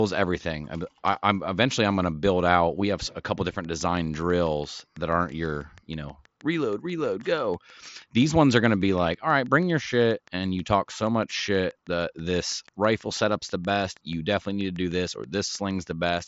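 From 3.49 s, just after "have a couple", a train of clicks starts and runs to 16.22 s: some seventy near-identical pulses at a steady 6.2 per second, peaking at roughly the level of the speech itself. Their regular pace, unchanging shape, and persistence through pauses separate them from codec glitches or dropouts in the band-limited mSBC headset path, which cuts off above 7.7 kHz. The likely cause is electrical interference or a faulty connection or power supply.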